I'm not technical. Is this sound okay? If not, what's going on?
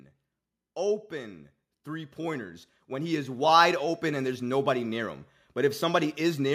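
No. Between about 1.09 and 5.24 seconds you can hear automatic gain rising. The recording device has a built-in volume control that adjusts itself, and here it decided the input was too quiet, so it slowly turned itself up over roughly four seconds. Because it raises everything at once, the speech and the background noise both get louder together, producing a gradual swell rather than a steady level.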